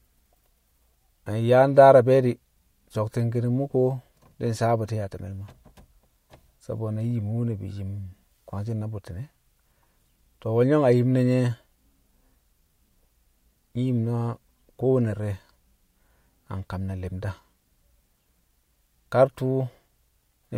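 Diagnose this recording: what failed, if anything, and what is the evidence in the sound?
Nothing in the recording stood out on listening; the speech carries no audible failure at any stage.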